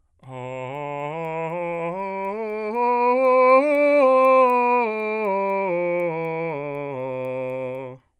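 Throughout the music, a resampler restarted on every block leaves a tick every 250 ms, steady at 4 Hz. Each block was converted without its neighbours, so every edge carries a small error, which fits upsampling from 24 kHz to 48 kHz. Unlike random dropout clicks, these are perfectly periodic and follow the signal.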